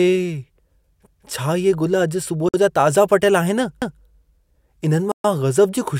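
A speech recording with two kinds of fault. Overlapping chunks: at 1.07–1.27 s and again at 3.82–4.02 s, a 200 ms stretch plays twice, giving a stutter at each join. This points to processing in 2.5 s blocks that start before the previous block ended. Unlike a dropout, no sound goes missing here; a piece is repeated. The sound also cuts fully to silence twice, for 52 ms at 2.49–2.54 s and for 128 ms at 5.12–5.24 s, then resumes. This is likely a Bluetooth stall, where the headphone buffer ran dry while delayed packets were resent. It differs from the chunk overlap because there is a gap with no repeated material.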